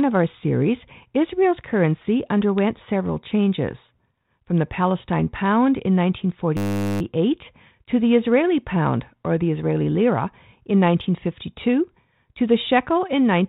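From 6.57 to 7.01 s the speech gives way to a steady 100 Hz buzz, a 10 ms scrap of audio repeated dozens of times. This is a system hang loop: the machine stalled while the sound hardware kept replaying one short ring buffer, and little if any speech is lost.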